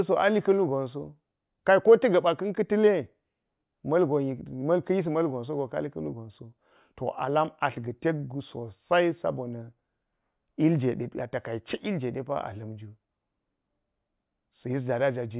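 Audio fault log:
No audible faults found in this speech recording.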